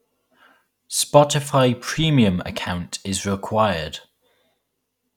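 No technical faults can be heard in this speech recording. The sound continues without any audible disturbance at any point.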